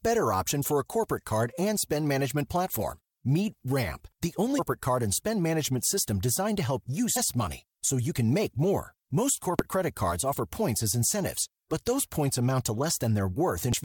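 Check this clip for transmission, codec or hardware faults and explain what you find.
Four short glitches cut through the speech at 4.58 s (just before "card and spend management"), 7.15 s (after "help you"), 9.59 s (before "credit cards offer points") and 13.73 s. Each is damaged data in a compressed stream: corrupted frames throw the decoder out of sync, giving a brief disruption while it finds the next valid frame.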